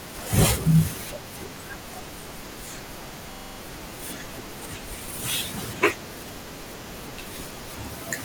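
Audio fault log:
3.33–3.58 s system hang loop: one identical 43 ms slice, which fits a 2048-sample buffer, repeats six times at 23.4 Hz, a rigid stutter without the variation of concealment.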